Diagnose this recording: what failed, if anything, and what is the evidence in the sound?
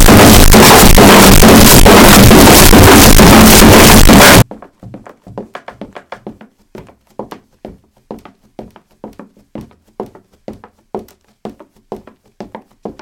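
Looks like a sample-format conversion problem, most likely float read as integer: 32-bit float data interpreted as 32-bit integers. From 0.0 to 4.42 s the sound turns into a loud, harsh, near-square wave at an almost fixed, high level, with the background noise as loud as everything else.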